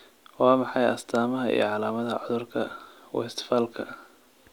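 No technical faults can be heard anywhere in this speech recording.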